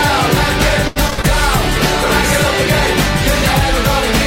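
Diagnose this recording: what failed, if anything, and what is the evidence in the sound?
The network stage failed first: from 0.87 to 1.25 s, repeated packet loss left a run of holes, each bridged by the receiver extending the last good sound. Roughly 160 ms was synthesised this way, about 42% of that stretch, and the longest hole was 83 ms. Because one patch follows another so closely, the sound turns choppy, with about 100 ms simply missing.

Next, the codec stage shows a call bitrate drop: from 1.58 to 3.41 s, the bandwidth estimate collapsed and the encoder fell from 128 kbps to 22 kbps, holding that floor for about 1.76 s. At so few bits, Opus quantises the spectrum coarsely and discards the upper band, so the sound goes dull, rough and watery across that span, losing its top end and gaining swirling artefacts until the bitrate climbs back.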